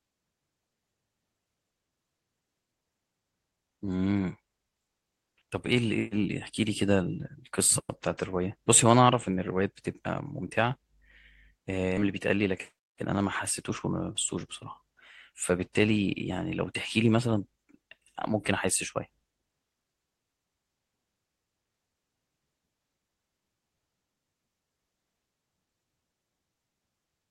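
Jitter buffer speed-up runs from 12.07 to 13.22 s in this speech clip: the receiver trimmed short pitch-period pieces, roughly 70 ms in all, to drain excess buffered delay, so the speech plays about 5% faster at unchanged pitch and sounds hurried.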